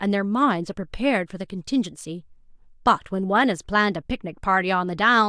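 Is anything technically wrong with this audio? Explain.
No, nothing technically wrong here.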